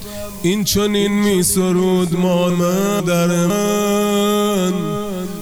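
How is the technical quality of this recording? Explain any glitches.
The recording has one clear glitch: chunks out of order between 2.5 and 3.5 s. A 500 ms chunk arrived one chunk late, so two half-second pieces play swapped, heard as a jumbled moment.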